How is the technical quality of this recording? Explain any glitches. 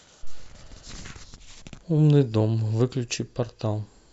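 No glitches can be heard anywhere in this recording.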